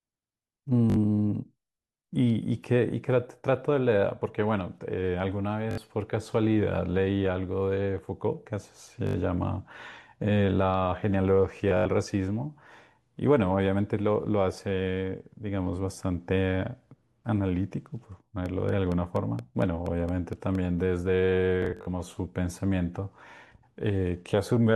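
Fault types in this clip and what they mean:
Bluetooth stutter: at 0.90, 5.71, 9.07, 11.57 and 21.62 s, late or lost wireless packets make the receiver replay its last short slice, producing a buzzing repeat covering 61 to 142 ms before the speech jumps ahead. The last two are scattered bursts.
Train of clicks: from 18.46 to 20.56 s, about ten near-identical clicks tick at a regular 4.3 per second, peaking around 5 dB above the speech. A pulse recurring this steadily is likely interference from nearby equipment or a faulty connection or power supply.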